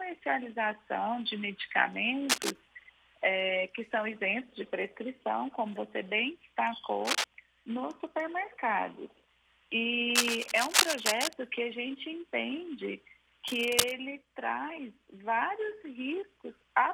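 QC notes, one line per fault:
2.29–2.52 s, 7.05–7.24 s, 10.15–11.33 s and 13.47–13.92 s, cable scratch noise: four bursts of dense, ragged scratching and rustling, each roughly as loud as the sound itself. The longest runs just over a second. The likely cause is a worn cable, connector or control being moved, so its contact resistance jumps erratically and injects irregular noise bursts that last only while the part is disturbed.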